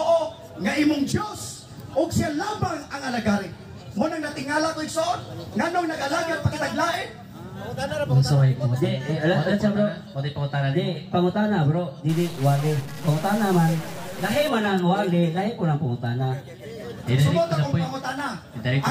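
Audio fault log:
12.09–14.49 s, stuck bit: for about two and a half seconds the sound turns harsh and buzzy, with a gritty noise floor sitting under quiet stretches. That's likely one data line stuck, knocking roughly half the samples off by a fixed step near -35 dBFS.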